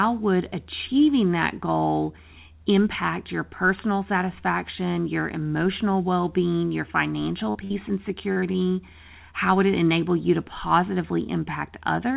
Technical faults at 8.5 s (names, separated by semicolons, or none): short concealed packet loss